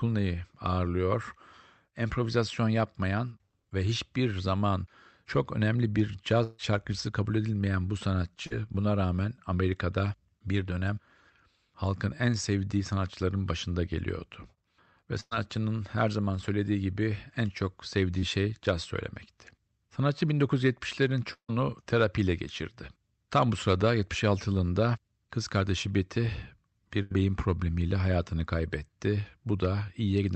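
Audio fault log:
6.43–6.60 s, long network dropout: after "zaman çok önemli bir", about 0.15 s of sound is continued artificially and then gives way to "şarkıcısı kabul edilmeyen bu". This is likely a stream interruption.
8.46 s, short concealed packet loss: 40 ms never arrived. The gap is bridged by extending the preceding sound, which leaves a brief smear.
15.21–15.33 s, burst of packet loss: about 100 ms is gone. The last sound is stretched and turned down over roughly 0.1 s, with a short moment of near-silence before the audio resumes further along.
18.19 s, short concealed packet loss: between "söylediği gibi en çok" and "şey caz", 20 ms is replaced by a continuation of the sound before it. This gives a tiny wobble.
21.33–21.50 s, long network dropout: roughly 0.15 s is filled with a fading continuation, then about 90 ms of silence follows. The likely cause is a pause in the incoming stream, and the audio returns past the lost part.
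27.02–27.12 s, burst of packet loss: 80 ms is missing just before "beyin problemiyle hayatını kaybetti". The receiver holds and fades the last sound across the gap, so it sounds like a held buzz or hiss.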